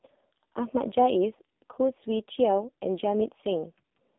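Throughout, the AMR narrowband mobile codec confines speech to about 200 Hz–3.6 kHz, nothing above 3.7 kHz, with heavy buzzy, synthetic coding artefacts that plain band-limiting lacks, fitting roughly 5.9 kbps.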